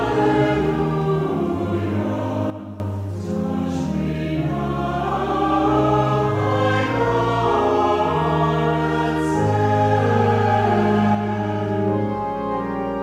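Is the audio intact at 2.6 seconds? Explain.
No. From 2.50 to 2.80 s a sudden gain jump drops the level by about 12 dB, and the sound and its background noise fall together, with no fade. The likely cause is a gain setting applied without a ramp. The waveform shows an abrupt step in amplitude, and the spectrogram dims evenly across all frequencies.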